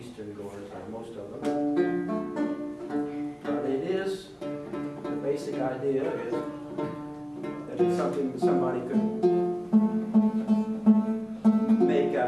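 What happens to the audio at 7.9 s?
Nothing goes wrong at 7.9 s: the audio plays through that moment intact, with no dropout, click, glitch or other fault.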